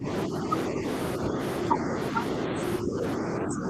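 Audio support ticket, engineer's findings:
Speech suppressed in double talk: level dips at 0.0–0.51, 0.68–0.85, 1.19–1.39, 1.71–2.19, 2.45–2.6 and 2.81–3.69 s, about 10 dB deep in the first and last, about 5 dB otherwise. Likely echo canceller/residual echo suppressor misreading near-end speech as echo and attenuating it. Dips are partial, not hard silent dropouts like packet loss or clean fades like a noise gate.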